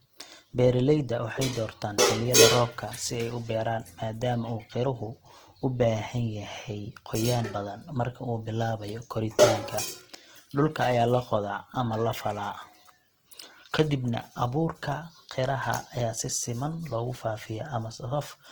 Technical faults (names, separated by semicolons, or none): Opus compression